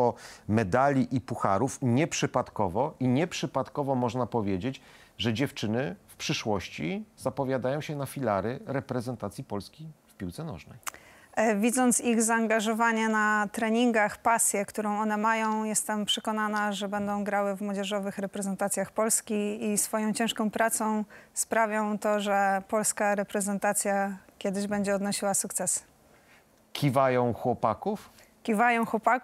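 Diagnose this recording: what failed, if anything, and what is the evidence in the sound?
Nothing in the recording points to a failure at any stage of the chain. No break, defect or disturbance stands out anywhere in the sound.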